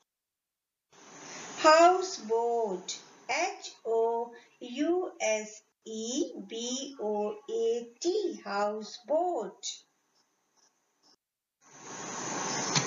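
No technical faults are audible.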